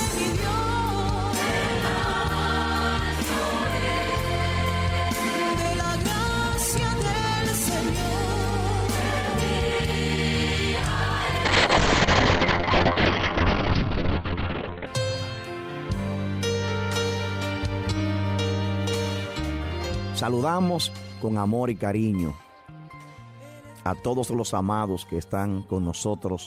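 From 11.45 to 14.92 s, a call bitrate drop starves the encoder, consistent with roughly 8 kbps. The sound turns coarse and muffled, cut off above 4 kHz.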